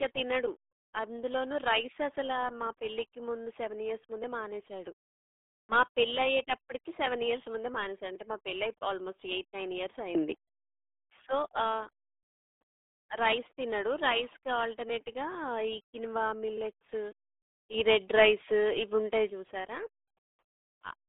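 Throughout, the speech shows RealAudio 14.4 codec damage. Nothing passes above about 3.8 kHz, and the heavy gargly smearing, unlike clean band-limiting, fits an 8 kbit/s codec.

From 17.74 to 19.3 s, a sudden gain jump of about 7 dB lifts speech and background noise together, unlike a louder talker, likely from a gain change applied without a ramp.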